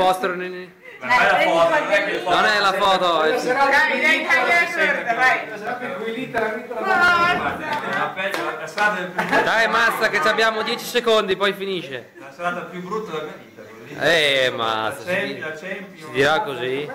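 From 0.74 s to 16.25 s, a click recurs every 0.71 s, about twenty in all, and is heard whenever sound is present. Such strict regularity likely comes from clock drift buffer slips: two devices running on separate clocks that disagree by roughly 500 ppm, so a buffer between them periodically drops or repeats around fifteen samples. Network dropouts or packet loss would leave irregular gaps. These clicks keep exact, metronomic spacing throughout.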